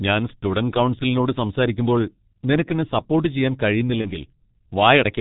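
From the start, the speech runs through the G.723.1 codec at about 6.3 kbit/s, and it's heavily damaged: nothing above 4 kHz, so it's muffled, with a hoarse edge and smeared consonants because the coarse 30 ms frames can't track fast changes.

At 4.01 s there's VoIP packet loss concealed by the speech codec, lasting to about 4.13 s. The gap fits a single lost 30 ms frame. The decoder fills it by stretching the previous sound into a fading buzzy tone or coloured noise, and the speech stays weak or distorted a little past the gap while the decoder recovers.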